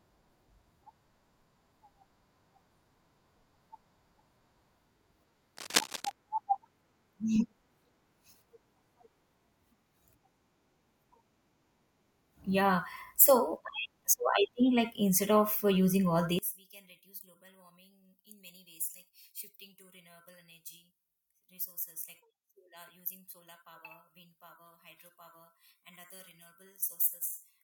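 A worn cable or connector likely shifted between 5.57 and 6.12 s, producing cable scratch noise: ragged, rustling bursts only slightly quieter than the speech itself. From 16.39 s, just after "of uh using all", one channel was likely inverted; in mono the centred speech cancels, dropping about 17 dB to a faint residue until the end.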